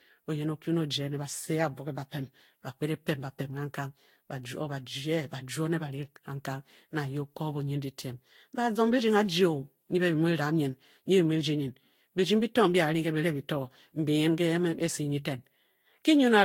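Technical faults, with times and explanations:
Throughout, generation loss: the speech has a swirly, smeared, hollow quality with blurred consonant attacks, and nothing is heard above 16.7 kHz. The likely cause is around five successive lossy encodes, with a Vorbis-like character at roughly 64 kbit/s. Each pass requantises on a shifted frame grid, so spectral holes and noise accumulate. That buildup sets it apart from a single low-bitrate encode, which would sound cleaner for the same bitrate.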